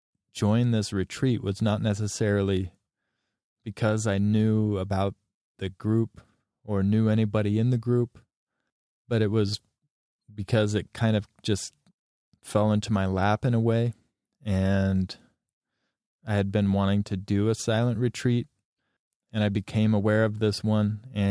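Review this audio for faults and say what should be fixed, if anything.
No faults can be heard anywhere in the recording. Nothing needs fixing.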